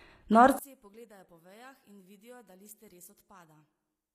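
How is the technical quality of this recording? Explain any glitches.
Pretty rough, honestly; there are two clear problems.

Throughout, the treble sounds synthetic, with gritty, lispy s sounds, likely HE-AAC compression at a low bitrate around 24 kbps, rebuilding the top end from copied lower bands.

From 0.59 s to the end, the speech drops by about 30 dB to a thin ghost, as if one channel were inverted and cancelling the shared centre in mono.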